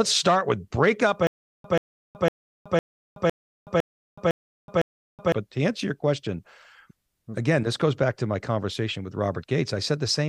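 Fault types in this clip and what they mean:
Stutter with silent gaps: just after "start with break up", from 1.27 to 5.32 s, a 134 ms fragment of speech plays eight times, each followed by 373 ms of dead digital silence, a steady 506 ms cycle. This is likely a stalled player or stream replaying its last chunk at each retry, and the speech in that span never arrives. Unlike random dropouts, the repeated burst and even spacing give it a mechanical rhythm.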